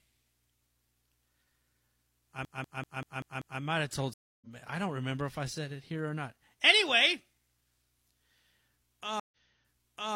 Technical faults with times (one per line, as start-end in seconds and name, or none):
2.45-3.61 CD stuck on one turn
4.13-4.47 stream reconnect
9.20-10.15 stream reconnect